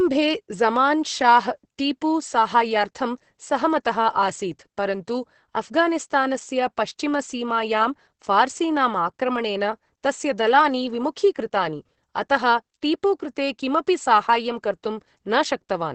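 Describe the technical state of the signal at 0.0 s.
Opus voice compression in its SILK mode, at a rate that fits about 10 kbps, runs throughout: nothing above 8.6 kHz survives, leaving the speech muffled, hoarse and slightly robotic.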